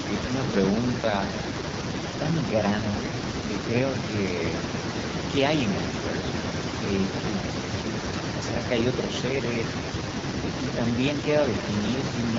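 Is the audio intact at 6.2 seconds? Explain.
No. At 6.2 s, as throughout the clip, there is echo with no canceller: the far end's loudspeaker output reaches its microphone and returns unremoved, so each phrase is trailed about 300 ms later by a thinner copy roughly 17 dB down.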